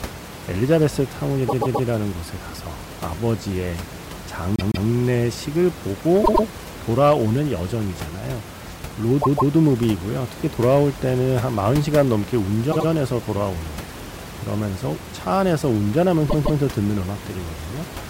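Repeated frames cause the speech to stutter at 1.48–1.87 s, where a 131 ms block plays three extra times, and at 4.56–4.87, 6.23–6.44, 9.21–9.52, 12.71–12.87 and 16.29–16.60 s, where blocks of 157, 105, 157, 78 and 157 ms each play twice more. A run of compressed frames was duplicated, so the decoder replays it, with added length, over the room noise about 14 dB down.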